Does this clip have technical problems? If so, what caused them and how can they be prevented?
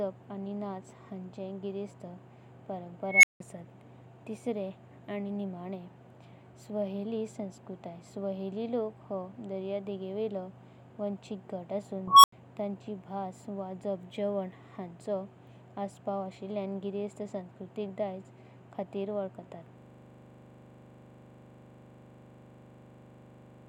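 Yes. An unstable filter at 3.08–3.40 s and 12.08–12.32 s: a tone near 2 kHz, then 1 kHz, swells for 156 ms and 164 ms, clips, and drops to silence for 171 ms and 85 ms. Bad recursive coefficients made the feedback diverge until overflow. Prevent it by checking that filter poles stay inside the unit circle before applying coefficients.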